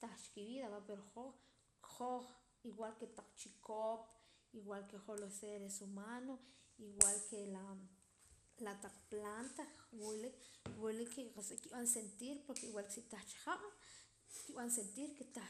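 Throughout the speech there is a dull, gurgling, granular quality typical of MP2 compression. Sub-band coding was starved of bits, so upper bands drop out and the remaining bands are quantised coarsely. The damage is plainly audible and fits a rate around 80 kbps, the likely cause. Unlike a transient error, this coloration is constant.

From 8.97 to 9.00 s, just before "planta wila", and again from 11.37 to 11.45 s, just before "nkib'an sentir porke igual", short bursts of DAB burbling break through as short blips of noise. Bit errors slipped past error correction into the audio data. Corrupted samples put short blips of noise in single sub-bands. That fits a handful of damaged frames at a very low error rate. These are sudden, isolated events, not the steady dullness of the compression.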